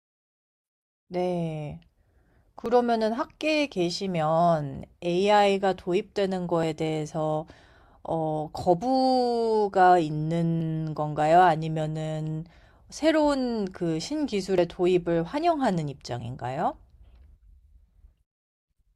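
At 2.66, 6.63, 10.61 and 14.58 s the speech skips abruptly, each time losing a few tens of milliseconds with the two sides butted together. The regular spacing of roughly 4 s points to audio missing between chunks, likely dropped while a recorder closed one block and opened the next.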